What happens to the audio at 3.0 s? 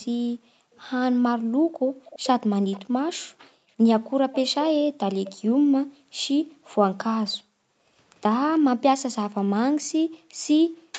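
At 3.0 s you're inside a stretch where the background is gated by the echo canceller, running from 0.04 to 4.29 s. While the far end's audio plays, the canceller clamps the mic hard, by about 40 dB at worst, so the room tone dips or vanishes for a total of around two seconds.

There's also an echo leak from 2.05 to 3.19 s: a faint copy of the speech comes back about 0.34 s late, roughly 20 dB under the main voice. It's likely a loudspeaker on one end whose echo canceller didn't fully scrub what its mic picked up.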